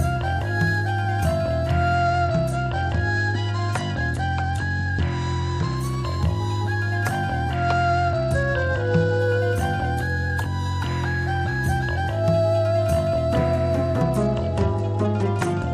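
Bluetooth SBC bit pool drops at 1.94–5.77 s, 7.56–9.19 s and 14.02 s to the end dull the treble and add a gritty noise floor. This fits the sender cutting the bit pool from 31 to 12 (about 88 kbps), starving the upper sub-bands and coarsening the rest.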